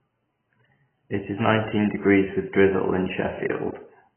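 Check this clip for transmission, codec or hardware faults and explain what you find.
One codec fault runs through the whole clip. Heavy AAC compression: the speech has nothing above 3.1 kHz and sounds dull, smeared and fizzy on sibilants. That points to AAC-LC at a very low bitrate around 12 kbps, likely forcing a low cut-off and coarse quantisation.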